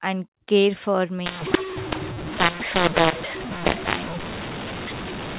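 From 1.26 s to the end, the speech turns harsh and grainy: a mu-law and A-law mix-up, where audio written as mu-law is read back as A-law. The two logarithmic curves map codes to different levels, so loudness gets scrambled and the quietest samples are lifted well above silence, filling pauses with noise. That noisy pause floor separates it from simple clipping or overdrive. Before 1.26 s, the G.711 telephone coding gives its normal narrow band, capped near 4 kHz.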